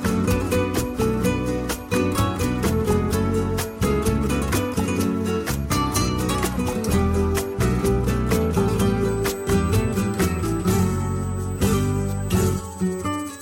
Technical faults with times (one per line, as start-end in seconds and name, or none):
9.08-13.41 USB whine